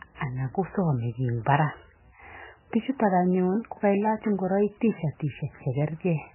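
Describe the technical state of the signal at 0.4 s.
MP3 compression at 0.4 s, as it is throughout the speech: the band stops dead at 3 kHz, with nothing above it, and the sound is watery and swirling with heavy damage. That is likely a low-bitrate MP3 encode, one starved enough to point to a rate near 10 kbps. The encoder dropped the treble entirely and zeroed the weaker frequency lines, which flicker in and out frame by frame and blur consonant onsets.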